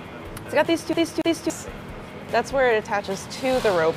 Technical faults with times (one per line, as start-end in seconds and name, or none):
0.93-1.50 CD stuck on one turn